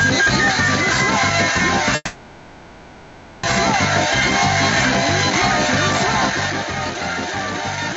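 Throughout the clip, the input gain is likely set far too high, so a fast limiter repeatedly clamps it, with a swing of roughly 15 dB. This is gain pumping: loud and soft parts end up closer in level, and the dynamics sound squashed.

From 1.95 s to 3.45 s, a long network dropout likely stops audio from arriving, and about 1.5 s is lost. The receiver fills almost the whole gap with a fading, buzzy or hissy continuation of the last sound, with only about 30 ms of silence. The audio then resumes without the missing part.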